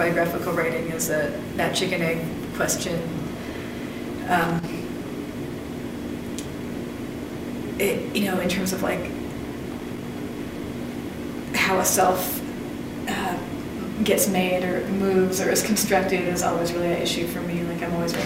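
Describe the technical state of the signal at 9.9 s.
At 9.9 s the signal is in the middle of a burst of loose connector crackle lasting from 9.72 to 10.09 s. A worn or dirty contact is making and breaking in quick succession, chopping the signal on and off, with any DC on the line adding pops, so the sound turns to irregular scratching. Unlike a digital dropout or buffer click, the breaks have no regular spacing, and unlike steady surface noise the burst is confined to this short span.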